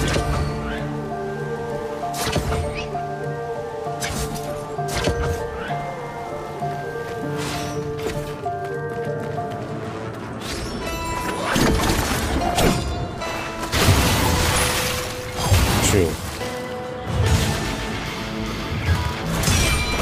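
No technical faults can be heard anywhere in the recording, and the signal holds steady and intact from its opening moment to its close.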